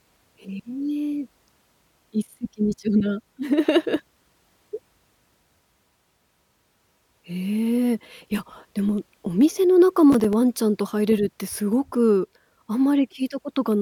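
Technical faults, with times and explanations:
10.12 to 10.33 s, processor overload crackle: the speech breaks into a short gritty burst as the processor, falling behind, misses a handful of buffer deadlines. The pattern fits buffers of around 5 ms. Each late buffer is replaced by silence, and its hard edges produce the clicks. On a waveform the signal shows brief flat dropouts with abrupt cliffs, and a spectrogram shows thin vertical broadband streaks across this stretch.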